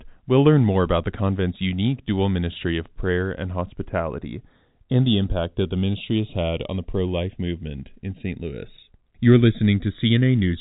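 Channels drifting apart runs through the whole speech clip. The two channels were captured on separately clocked devices, and a clock mismatch that points to something around 70 ppm lets the inter-channel delay grow steadily to a bit under a millisecond by the end. In a mono fold-down, that sliding offset moves comb-filter notches slowly across a spectrum already capped near 3.8 kHz by the telephone-band G.711 coding, producing a gradual, drifting flanging colour.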